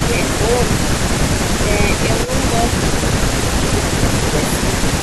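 At 2.24 s, an echo canceller on a loudspeaker end likely let part of its microphone pickup slip through and sent it back down the line. This echo leak shows up between 2.24 and 2.31 s as a brief, faint copy of the speech trailing the original by 220 ms. It sits roughly 15 dB below the direct voice, so it comes across as a short ghostly scrap rather than a clear repeat.

From 4.46 to 4.6 s, the echo canceller likely could not tell the near talker apart from loudspeaker echo while both sides spoke at once, so it turned both down. This is speech suppressed in double talk. The voice dips by as much as about 10 dB over roughly 150 ms, briefly sounding pulled back before it returns to full level.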